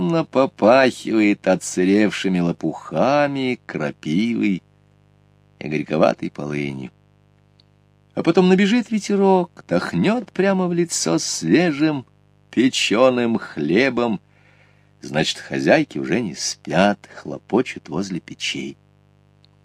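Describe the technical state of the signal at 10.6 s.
Mains buzz runs through 10.6 s as everywhere in the clip: switching spikes at 100 Hz stack 50 Hz harmonics into a steady, raspy buzz well below the sound.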